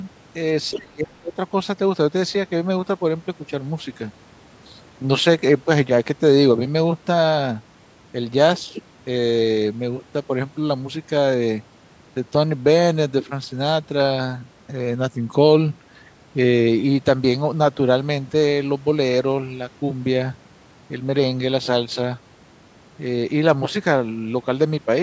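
Speech in which the talker is pushed down from 0.71 to 1.38 s, dipping by about 25 dB for roughly half a second. This is likely speech suppressed in double talk, with an echo canceller ducking the near talker while the far side spoke. This differs from packet loss, where audio is lost in transmission rather than turned down by the canceller.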